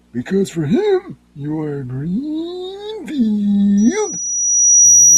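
At 3.77 s a loudspeaker feedback squeal kicks in and keeps going right to the end of the recording. The mic is hearing the speaker it's feeding, and around 5.8 kHz the loop gain tips past one, so that frequency keeps feeding itself. You hear a thin, piercing tone swell up over about a second until it's sitting roughly 10 dB above the speech, and nobody breaks the loop before the audio ends.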